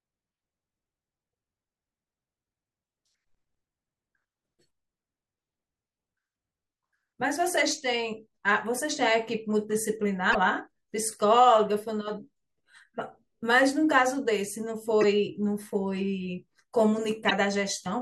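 At 10.31 to 10.36 s, 15.01 to 15.04 s and 17.27 to 17.32 s the speech breaks into short glitches, heard as a chirp, squawk, click or brief hole: damaged data in a compressed stream. Corrupted bytes throw the decoder off, so it garbles those frames while hunting for the next valid header.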